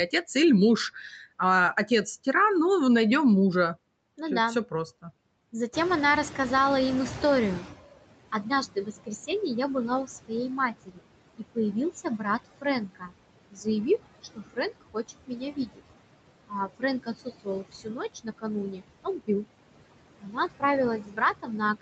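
Across the whole clip the speech carries noise suppressor artifacts: the suppressor pulls down every band it judges to be steady noise, by about 21 dB, frame by frame. The background sinks in the gaps and swells back under each phrase. On a spectrogram the noise floor looks blotchy and patchy. Everything stops near 8 kHz, which fits a wideband Opus call path.

Around 5.5 s the room noise steps up by about 13 dB. From 5.73 to 7.91 s the noise suppressor is catching up: its noise estimate trails the louder background, so the new noise comes through with little reduction and then fades by about 17 dB over roughly 2.2 s as the estimate adapts. A spectrogram shows a broadband band of noise that brightens suddenly and then dims gradually over those two seconds.

Speech is cut by the noise suppressor in four stretches: 8.32 to 9.30 s, 10.05 to 15.80 s, 16.48 to 19.45 s, and from 20.18 s to the end at 21.82 s. 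The suppressor treats parts of the speech as noise and turns them down by about 20 to 22 dB. Soft consonants, word endings or a quiet phrase sound swallowed, adding up to about 0.4 s in the first stretch, around a second and a half in the second, and about a second in the third. In the waveform the tails of the syllables collapse abruptly instead of decaying, and on a spectrogram the faint high-frequency consonant energy is missing in those places.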